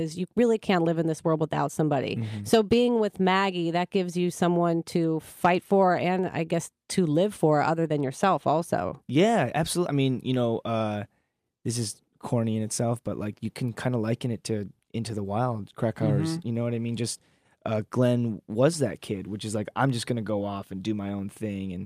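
No technical faults are audible.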